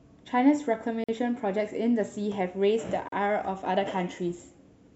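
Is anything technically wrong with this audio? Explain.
Yes. The speech has two gaps at a join of encoded pieces, from 1.04 to 1.09 s (about 46 ms) and from 3.08 to 3.12 s (about 38 ms), recurring every 2.0 s. The audio was encoded in separate segments and joined untrimmed, so each segment's encoder start-up delay and last-frame padding remain as silence. The sound drops out abruptly, with smeared edges, then resumes exactly where it stopped.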